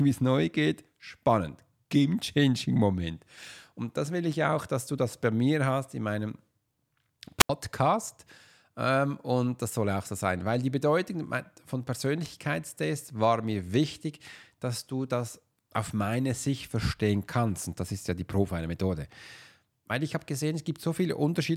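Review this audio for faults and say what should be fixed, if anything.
A wireless microphone squelch dropout occurs between 7.39 and 7.50 s. As the analogue FM signal fades, hiss rises briefly, then the receiver's squelch mutes the output for about 79 ms before the speech returns. That short burst of static before the silent hole is what separates it from a digital packet dropout, which cuts out cleanly. To prevent it, keep the transmitter in clear line of sight of the receiver antennas and use diversity reception on a clean frequency.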